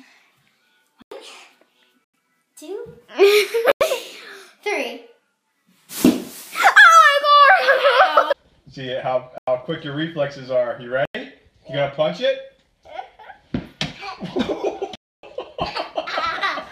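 Blocks of digital silence at 1.02, 2.04, 3.72, 9.38 and 11.05 s (93 ms each, fitting a 4096-sample buffer) and at 14.95 s (279 ms). Output buffers likely went unfilled, so the sound cuts out and back with no fade.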